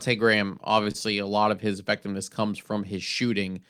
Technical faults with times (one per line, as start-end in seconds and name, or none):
0.83-0.96 short stall from a late packet